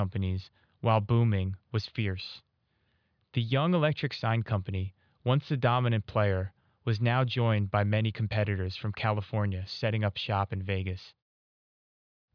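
Listening through the speech recording, nothing stood out as a technical problem at any point.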